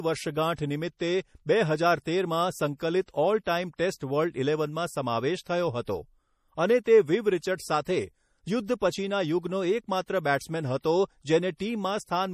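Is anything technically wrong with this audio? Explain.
Yes. Throughout the speech, nothing is present above 15.1 kHz, and the sound is plainly watery and swirly, with chirpy sibilants and smeared onsets. This is likely MP3 compression at a low bitrate, consistent with about 40 kbps, where the encoder cuts the treble and drops weak spectral lines frame by frame.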